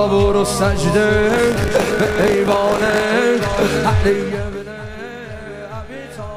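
From 1.28 to 3.04 s the audio has buffer tearing, heard as a robotic 50 Hz buzz. Writer and reader of the ring buffer cross each period. Roughly a tenth of each 20 ms chunk replays audio from about 40 ms earlier, with hard joins.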